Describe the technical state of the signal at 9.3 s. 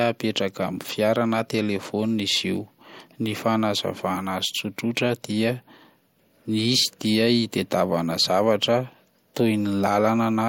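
At 9.3 s the speech signal is intact, with no audible fault at that moment.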